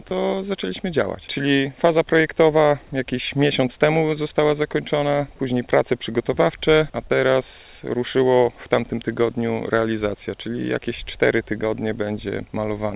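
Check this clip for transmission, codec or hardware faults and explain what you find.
Nothing stood out on listening to this clip that would point to a transmission, codec or hardware problem.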